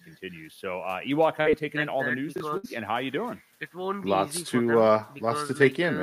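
Speech, with three network-style glitches close together. At 1.41 to 1.47 s there's short concealed packet loss: roughly 40 ms never arrived in time, so the decoder stretched the preceding sound to cover it and then blended back. You hear a quick smear or wobble. Right after, at 2.36 to 2.40 s, the chunks are out of order. A 20 ms piece plays one chunk late, after audio that should have followed it. Nothing goes missing, but the swapped order and its hard joins make a brief jumbled moment. Then at 2.57 to 2.65 s comes a burst of packet loss. About 60 ms of audio is gone, and the receiver holds the last sound while fading it, giving a short buzz or hiss. The speech then resumes further on, with that stretch skipped.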